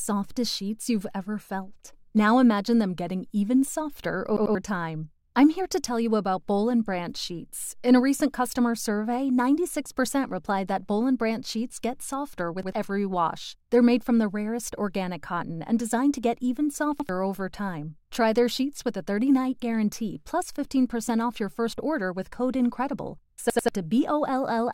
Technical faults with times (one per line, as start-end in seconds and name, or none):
4.37-4.55 repeated buffer
12.63-12.72 repeated buffer
17.00-17.09 repeated buffer
23.50-23.68 repeated buffer